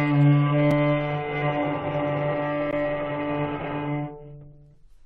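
At 0.71 s and 2.71 s, a gap between stream segments cuts the sound. Segment timestamps leave holes of 5.1 and 16.3 ms, filled with hard-edged silence, two seconds apart.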